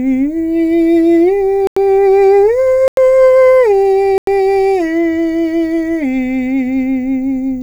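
At 1.67 s the music drops out completely and returns at 1.77 s. The same happens from 2.88 to 2.97 s and from 4.18 to 4.27 s. Each is a block of digital silence about 93 ms long. A run of samples was zeroed, which fits a 4096-sample buffer not filled in time. There is no fade. Each gap is heard as a short, hard hole in the music.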